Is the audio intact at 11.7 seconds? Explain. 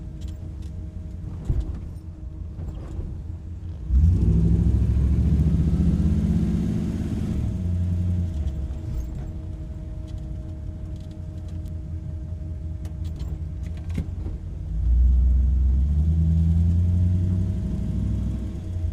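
No. At 11.68 s there is a single sharp tick, broadband and unrelated to the surrounding sound, peaking at about -24 dBFS. This is a bit error spike: one flipped bit throws a single sample off by a power of two before it snaps back.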